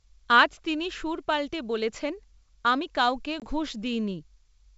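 At 3.40 s, just after "আমি কাউকে", packet loss on an ADPCM call cuts a hard-edged silent gap of about 20 ms, roughly one packet. The G.722 decoder's predictor and step size then mismatch the sender's, so the speech resumes slightly disturbed before settling.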